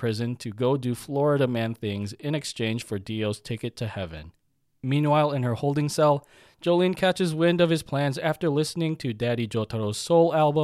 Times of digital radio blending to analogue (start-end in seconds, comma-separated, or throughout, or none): none